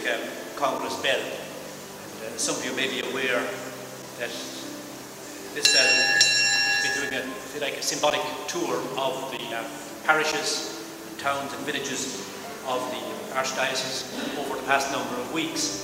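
At 9.52 s, 12.59 s and 14.02 s the audio jumps abruptly, with no gap of silence between the two sides. The first and third jumps skip about 70 ms, the second roughly 20 ms. This is likely a dropped buffer (overrun): the capture side failed to read its samples before the hardware overwrote them, so a block of sound vanished and the surrounding material was spliced directly together.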